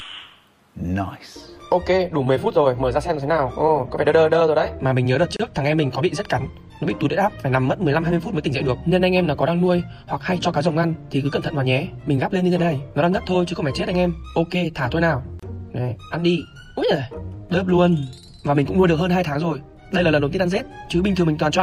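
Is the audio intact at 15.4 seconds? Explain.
No. From 15.40 to 15.43 s, a 31 ms gap at a join of encoded pieces: untrimmed encoder delay and padding leave silence. Unlike a dropout, the sound resumes exactly where it stopped.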